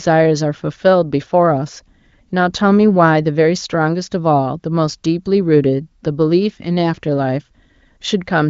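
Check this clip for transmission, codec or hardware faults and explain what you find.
No faults found.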